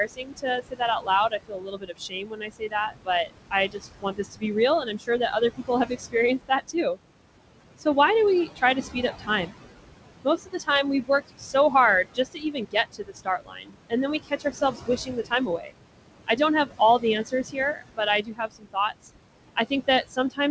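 Noise suppressor artifacts run through the whole of this speech recording. The suppressor pulls down whatever it judges to be steady background by about 21 dB, frame by frame. Because the room noise sits only about 9 dB below the talker, it dips in the gaps and swells back under the speech. The band stops at 8 kHz, which fits a G.722 call path at 64 kbps. Speech cut by the noise suppressor is heard from 0.05 to 6.98 s, with around three seconds affected and drops of up to about 21 dB. It recurs from 8.47 to 9.6 s, right after "why do we", where roughly a third of a second sinks by up to about 17 dB. Further cuts fall at 10.24 to 15.74 s (about two seconds, up to about 21 dB), 16.27 to 19.05 s (about a second, up to about 20 dB) and 19.56 s to the end (up to about 15 dB). In each stretch the suppressor has mistaken soft consonants, word endings or quieter passages for noise, so they come out faint or swallowed.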